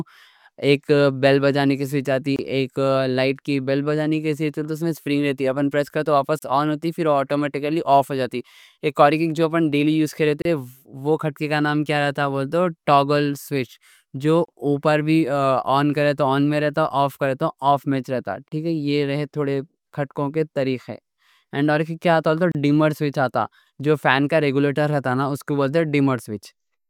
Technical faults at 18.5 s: gap at a join of encoded pieces

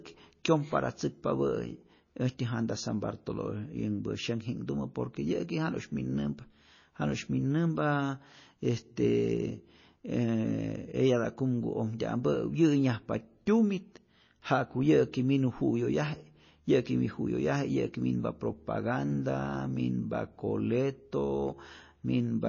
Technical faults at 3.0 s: MP3 compression

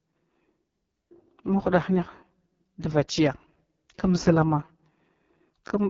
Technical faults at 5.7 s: AMR wideband (HD Voice) codec

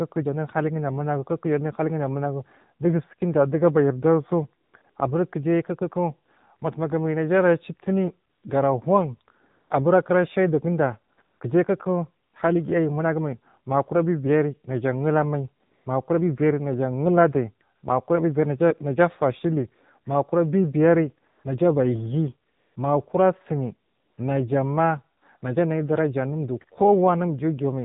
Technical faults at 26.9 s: AMR narrowband mobile codec

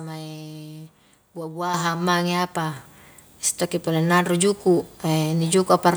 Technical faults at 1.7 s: microphone volume stepped up

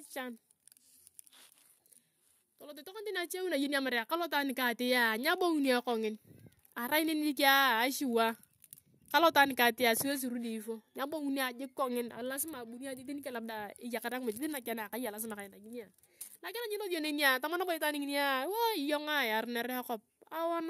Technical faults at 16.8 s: none

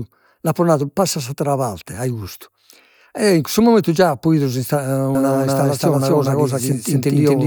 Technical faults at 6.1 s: doubled audio track

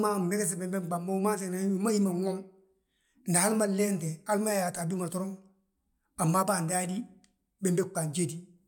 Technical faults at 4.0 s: none

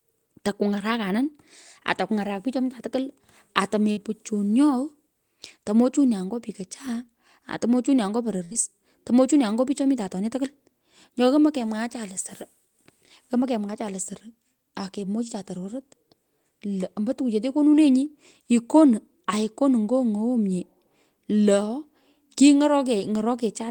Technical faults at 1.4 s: none

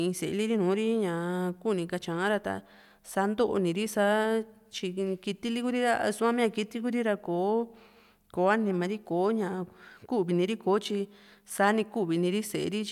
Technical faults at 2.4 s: none

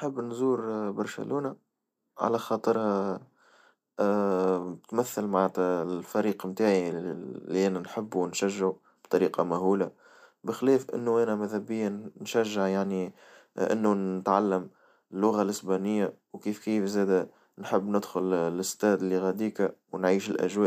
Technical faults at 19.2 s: none

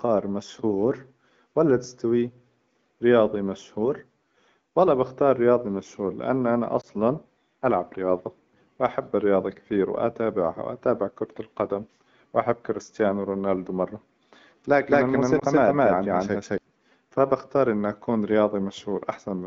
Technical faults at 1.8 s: none

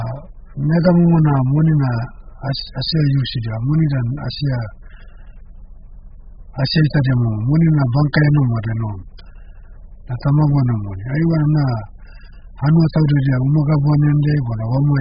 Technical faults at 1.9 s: AAC compression

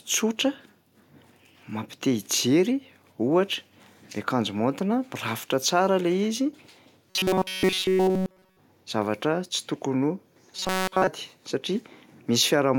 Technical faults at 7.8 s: robotic sound from repeated short buffers

